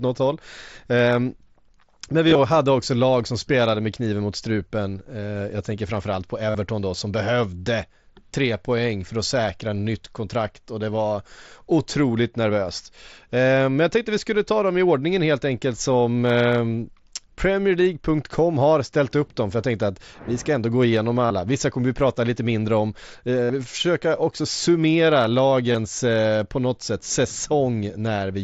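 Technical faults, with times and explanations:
2.28–2.38, 6.50–6.55 (right after "jag tänker framförallt på"), 21.26–21.31, 23.45–23.50 and 25.72–25.75 s, concealed Bluetooth headset packet loss: packets between headset and phone went missing, between 22.5 and 60 ms per event. The receiver filled each hole by repeating the best-matching recent waveform.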